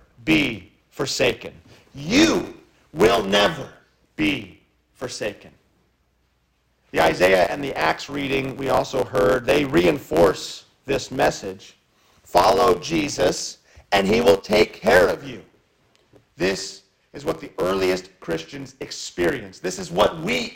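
From start to finish a block size mismatch (truncated) is present: one stage writes longer blocks than the next reads, discarding each block's tail. This produces a steady 91.9 Hz buzz, fitting 512-sample blocks, while the audio runs 1.07 times fast at roughly normal pitch.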